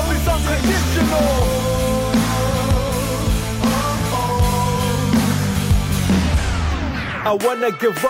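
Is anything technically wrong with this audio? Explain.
No, nothing technically wrong turns up here; the audio runs along without any glitches or problems worth pointing out.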